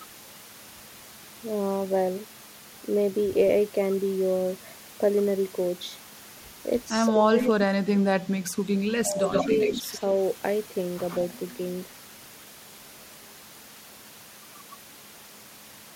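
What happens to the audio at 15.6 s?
At 15.6 s the speech continues without any dropout, click or distortion, and the audio is intact there.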